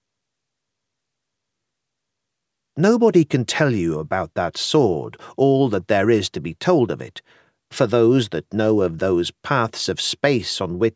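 No technical faults can be heard anywhere in this recording.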